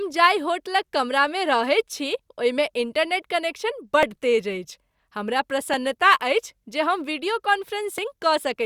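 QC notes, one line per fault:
3.23, 4.03, 5.74 and 7.98 s, dropped buffer (overrun): four jumps where the sound skips forward with no silence. At 4.03 s the jump falls just before "तेज अछि हमरा", and at 5.74 s just after it. A few milliseconds are lost at each of the first three and around 20 ms at 7.98 s, likely because samples were overwritten before being read. On a spectrogram each shows as a thin broadband vertical line, and the waveform has an abrupt step with no gap.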